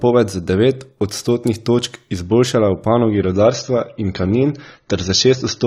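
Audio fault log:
3.10 to 5.67 s, adaptive stream at a lower bitrate: right after "odstotnih točk izboljšala v", the speech switches abruptly, with no gap, to a thinner, swirlier rendering. The player has dropped to a lower-bitrate version of the same stream, and the sound fits a step from roughly 96 kbit/s AAC down to about 24 kbit/s. Sibilants lose their sheen. On a spectrogram, content above 6.9 kHz vanishes at a hard vertical boundary and stays gone to the end, while the waveform runs on unbroken.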